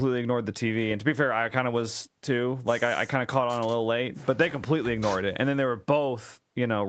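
No technical faults can be heard in this speech recording.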